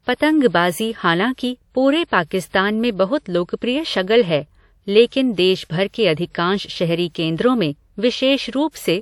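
A short hiss smears in just ahead of sharp onsets at 0.49 s, 2.07 s before "पाकिस्तान में बहुत लोकप्रिय", 5.07 s before "देश भर के अधिकांश" and 5.64 s before "भर के अधिकांश शहरी", each lasting 43 to 57 ms. This is pre-echo: the transform codec spread quantisation noise sized for each loud attack across its whole block, filling the quiet moment before it.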